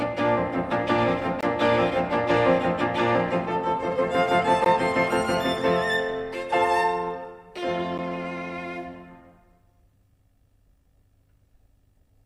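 At 1.41 to 1.43 s the sound stops for about 21.5 ms, then again for about 15.4 ms at 4.65 s and about 9.7 ms at 7.98 s. Each is a gap at a join of encoded pieces: separately encoded segments were butted together with each run's leading encoder delay and trailing frame padding left in. Unlike a dropout, which loses material, the sound resumes exactly where it broke off, and the short silences have softened, codec-smeared edges.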